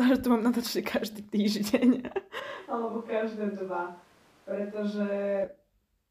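At 2.40 s the speech turns roomy and hollow, about 5 dB quieter and thinner in the bass, until 5.44 s; likely a switch to a distant microphone.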